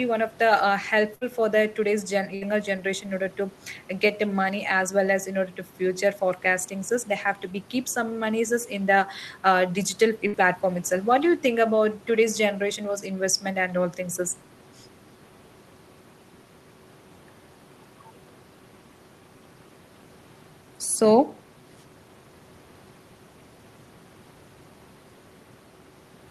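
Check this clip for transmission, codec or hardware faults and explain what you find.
Three bursts of packet loss interrupt the speech, at 1.15 to 1.24 s, 2.35 to 2.44 s and 10.27 to 10.36 s. Each time about 60 ms of audio never arrived, and the receiver covered the hole by extending the last sound for roughly 60 ms while fading it down. Voiced sounds turn into a short held buzz, other sounds into a decaying hiss, and then the speech jumps ahead with a piece missing. Unlike a plain dropout, the gap is filled with smeared sound rather than silence. The room noise, about 29 dB below the speech, comes from the recording itself.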